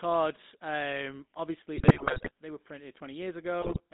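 The whole recording carries the GSM full-rate codec sound, with the kind of coding damage that fits a 13 kbps full-rate stream. The speech is rebuilt from a vocal-tract filter excited by a sparse, regularly spaced pulse train, so it has a buzzy, gravelly roughness. On a spectrogram the energy sits in a band from about 200 Hz to 3.7 kHz, with nothing above and a coarse, streaky harmonic texture.

From 1.76 to 2.31 s, between "um obviously" and "they were printed", GSM bit errors break the decoded speech. Corrupted filter, pitch and gain values make it squawk, pop and gargle for roughly half a second, which points to a run of 28 damaged frames. A second, shorter burst follows from 3.62 to 3.81 s. On the waveform both show as level jumps frame by frame, and the spectrogram shows smeared, displaced formant bands in blocks about 20 ms wide.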